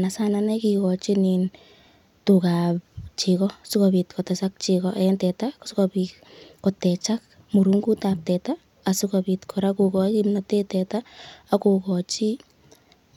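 No dropouts, glitches, distortion or other technical faults can be heard anywhere in the recording.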